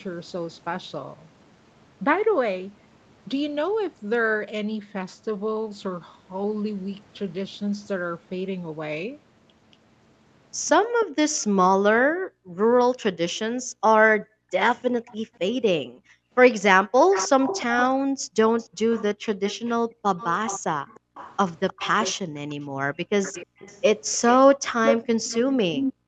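It's a speech clip with an echo leak: a copy of the voice trails about 306 ms behind, at about 20 dB down from 11.0 to 11.45 s, about 30 dB down at 15.06 to 15.16 s, then a stronger one around 10 dB down from 17.11 s to the end, likely a far-end speakerphone whose echo canceller let some loudspeaker pickup through. There's also background gated by the echo canceller, with the room sound ducking by up to about 40 dB while it clamps the mic. It happens in patches between 11.11 and 16.32 s (about 2 s in total) and between 18.02 and 21.15 s (about 1 s), plus brief dips at 22.26 to 23.59 s, 24.55 to 24.7 s and 25.93 to 26.06 s.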